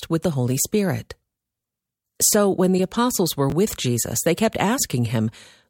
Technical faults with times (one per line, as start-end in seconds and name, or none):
3.50-3.52 chunks out of order